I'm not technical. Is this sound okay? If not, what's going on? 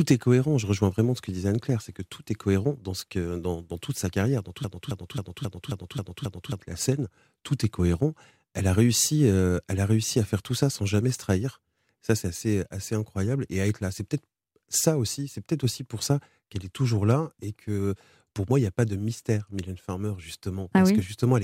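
No. From 4.64 to 6.61 s, right after "sa carrière dans tout", a broken-record loop repeats one quarter-second snippet seven times, exactly the same each time. Playback likely froze and kept resending it. Unlike an echo or stutter, nothing fades and the speech then skips ahead to "la scène tout est".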